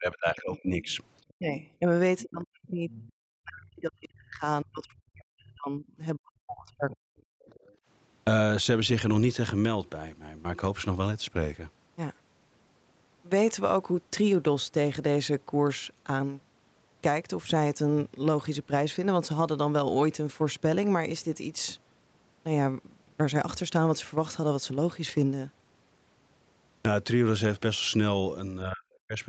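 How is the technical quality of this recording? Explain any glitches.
The recording has clear echo-control problems, concentrated in the first eight seconds and again at the very end, all on a band-limited call path with nothing above 8 kHz.

Speech suppressed in double talk: the echo canceller most likely could not tell the talker's speech from loudspeaker echo while both sides spoke at once, so it turned the microphone signal down. The speech dips by about 20 dB from 0.0 to 0.99 s, by about 30 dB from 1.36 to 1.89 s, and by up to about 40 dB across 2.23 to 7.26 s, with about four seconds of that stretch affected. It drops again by about 40 dB from 28.63 to 29.2 s.

Other side's voice leaking through: the far-end voice played on the talker's loudspeaker was likely not fully removed from the microphone, so a second voice breaks through in short scraps. It appears from 0.9 to 1.7 s at about 25 dB below the speech, from 2.19 to 2.23 s at about 20 dB below, from 2.92 to 3.12 s at about 25 dB below, and from 7.45 to 7.75 s at about 30 dB below. 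It sounds faint against the main talker.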